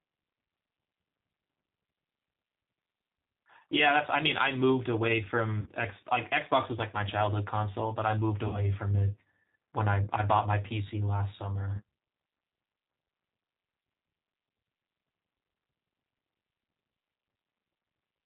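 From the start, the speech carries the plainly audible roughness of a G.729 codec, which fits an 8 kbit/s coder that rebuilds the voice from a filter, a pitch predictor and a few pulses per frame. A spectrogram shows nothing above 4 kHz, with grainy, smeared harmonics.

At 5.60–5.71 s, 8.48–8.60 s and 11.76–11.82 s, VoIP packet loss concealed by the speech codec shows up. The decoder stretches its last pitch and filter over 60, 60 and 30 ms of missing audio, which fits two, two and one lost packets. Each gap sounds like a brief buzzy tone or coloured noise that fades. The waveform shows a decaying stretch.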